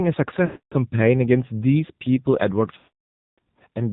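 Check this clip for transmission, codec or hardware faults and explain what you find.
Two faults are present: narrowband AMR coding throughout, and two runs of lost AMR speech frames.

AMR narrowband mobile codec, whole clip: nothing is heard above 4 kHz, and the speech has a buzzy, synthetic edge. The codec damage is plainly audible, which fits one of the lower AMR-NB modes, around 7.4 kbps. At that rate the encoder represents the voice as a vocal-tract filter excited by only a few pulses per 5 ms subframe. Fine detail between those pulses is discarded, which produces the thin, mechanical tone.

Lost AMR speech frames, 0.46 to 0.75 s and 2.78 to 3.39 s: the first gap lasts about 260 ms, which points to roughly 13 consecutive 20 ms frames. The second lasts about 600 ms, about 30 frames. When frames are missing, the decoder keeps repeating the last valid pitch and filter settings while lowering the gain. 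Each gap therefore begins as a stretched, smeared continuation of the preceding sound, then fades to silence within a fraction of a second. The longer second gap leaves a longer stretch of silence.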